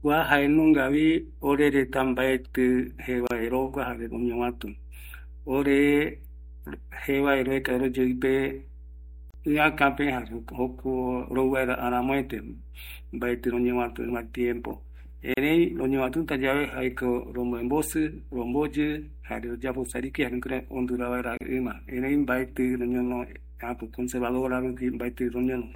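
A ground loop or nearby transformer couples the 60 Hz power line into the signal, so mains hum runs through the whole speech as a steady low tone roughly 20 dB below it.

At 3.27, 9.31, 15.34 and 21.37 s, separately encoded pieces were joined with their padding left in, so each gap at a join opens about 34 ms in the sound, regularly every 6 s, with smeared edges that leave a shorter silent part.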